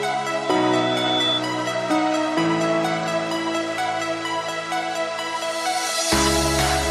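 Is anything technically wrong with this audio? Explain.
Yes, there's a loudspeaker feedback squeal from 0.44 to 1.44 s. The mic was hearing its own speaker, so a 3.5 kHz tone kept feeding itself. It swells over most of a second until it's roughly as loud as everything else.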